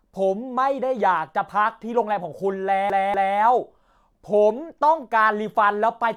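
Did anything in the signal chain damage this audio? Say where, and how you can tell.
Yes. The playback stage shows a CD stuck on one turn. From 2.90 to 3.38 s, the same 0.24 s of speech plays twice, with a brief mute at each jump. A scratch sends the laser back one track per rotation, giving that fast, even stutter.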